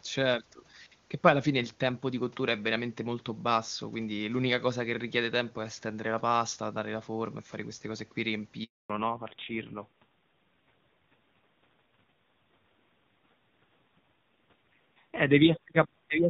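Handover gap at 8.64 to 8.90 s: the call switched networks and no speech frames arrived for 260 ms, so the speech cuts out abruptly into silence. Fallback to narrowband from 8.90 s to the end: the clear HD Voice sound, consistent with AMR-WB near 23.85 kbit/s, gives way to audio with nothing above 4 kHz, dull and rough in a way that points to AMR-NB at a low rate around 5.9 kbit/s.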